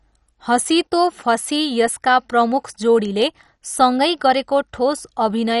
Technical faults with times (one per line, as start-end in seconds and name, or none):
0.00-5.60 MP2 compression